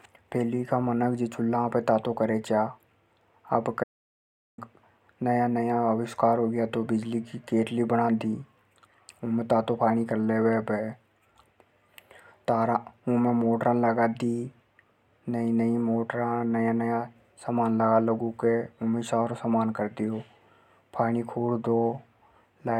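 At 3.84 s the speech cuts off mid-flow into an audio dropout to silence lasting about 0.74 s, until 4.58 s, with no room tone at all. The input was likely lost while recording continued writing silence. The waveform shows a dead-flat line, the spectrogram a blank column.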